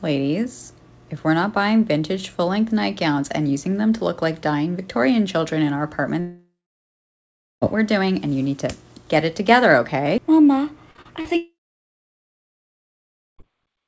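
Long network dropout, 6.20 to 7.63 s: sound stops, a fading buzzy continuation covers the start, then about 1.09 s of near-silence; likely about 1.42 s of audio never arrived.

Repeated packet loss (robotic sound), 10.91 to 11.27 s: four short holes, the longest 39 ms, are each patched by stretching the last sound, giving choppy sound with pieces missing over about a third of the span.

Long network dropout again, 11.37 to 13.40 s: the same decaying fill gives way to about 1.85 s of silence, with roughly 2.02 s of audio likely lost, all heard through a G.722 call path with nothing above 8 kHz.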